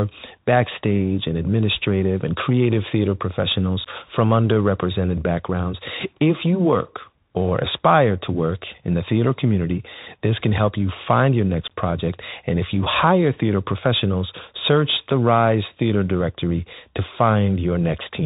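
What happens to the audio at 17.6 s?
At 17.6 s the speech sounds boxed-in and dull, with scratchy s sounds, a gritty granular hiss underneath, and roughness wherever loud, bright sounds occur. This is the Bluetooth CVSD headset codec, present for the whole clip, not just this moment. CVSD sends a single up-or-down bit per sample and adapts its step size, so nothing above 4 kHz survives. Fast, loud high-frequency movement outruns the step and distorts, which fits a 64 kbps link.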